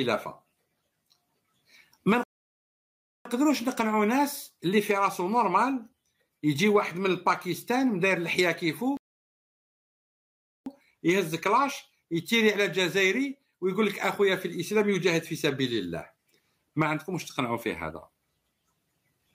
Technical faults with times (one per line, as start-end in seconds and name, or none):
2.23-3.25 playback stall
8.97-10.66 playback stall